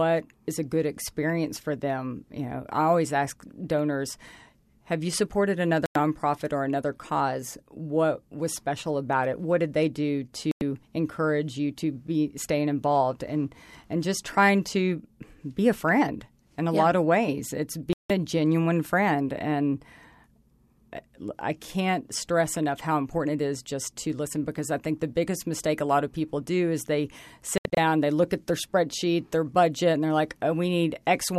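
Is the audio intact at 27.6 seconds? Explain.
No. From 27.58 to 27.78 s, between "people do is they" and "they look at their", the speech breaks into short silent holes, the longest 72 ms. This is a digital broadcast dropout: the receiver muted while frames were lost or corrupted, losing 120 ms of programme.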